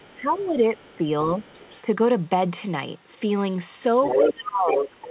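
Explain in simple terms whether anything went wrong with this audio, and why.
Speech suppressed in double talk shows up from the start to 1.05 s, briefly at 1.82 s, and again from 4.17 s to the end. At those moments the talker's voice sinks noticeably, most deeply in the final stretch. Both people were likely talking at once, and the echo canceller, unable to tell the talker apart from the loudspeaker's echo, turned everything down together.

The other side's voice leaking through is heard from 0.02 s to 1.81 s and from 3.98 s to the end. The talker's device likely plays the other person aloud, and the microphone picks that back up. The echo canceller likely failed to remove all of it. In the first stretch the stray voice is faint and sits well underneath. In the last second it is roughly as loud as the talker, so the two voices compete. Throughout, the call sounds telephone-narrow, with nothing above 4 kHz.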